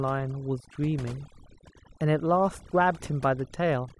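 From start to finish there's overdone noise removal: the reduction was set too aggressively, so the gaps sink to near silence with twinkly specks and quiet parts of the speech go with them.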